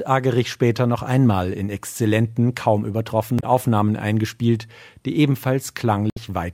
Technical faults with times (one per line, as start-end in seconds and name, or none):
3.36-3.44 damaged data in a compressed stream
6.09-6.18 damaged data in a compressed stream